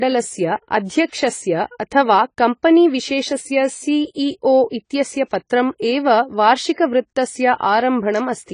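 Speech, with AAC compression damage audible throughout: nothing exists above 10 kHz, visible on a spectrogram as a flat ceiling. The dull, smeared sound likely comes from AAC-LC at a low bitrate, around 24 kbps.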